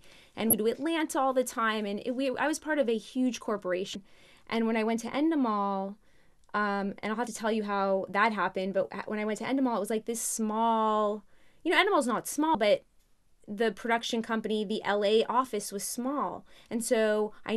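At 0.50 s, 3.92 s, 7.24 s and 12.52 s the speech breaks into a brief chirp, squawk, click or short hole, each lasting about 0.03 s. These are damaged data in a compressed stream: the decoder meets corrupted bytes, misreads those frames, loses sync and hunts for the next valid frame header. On a spectrogram each event is a narrow vertical disturbance that doesn't match the surrounding speech harmonics. On the waveform it is a short break with abrupt edges.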